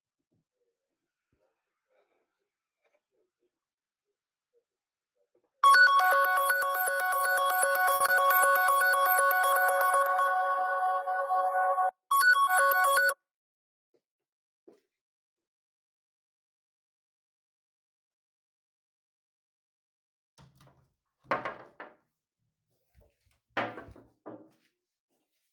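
A short stall from a late packet comes at 7.95 to 8.02 s. A packet arrived late, so the jitter buffer ran dry. The receiver held the last bit of sound for about 50 ms until the data turned up, then resumed from the same point, so nothing is lost. The playback simply sits about 50 ms later afterwards. It is heard as a momentary drawn-out sound with a faint buzz or dip.

Short concealed packet loss follows at 8.06 to 8.10 s and again at 12.45 to 12.49 s. Each time, 20 ms of audio never reached the decoder. The receiver bridged the hole by extending what came just before, tonal parts from their pitch and noisy parts as shaped noise, then faded back into the real signal. Each gap comes across as a tiny smear or wobble, and a very brief sound at that spot can disappear.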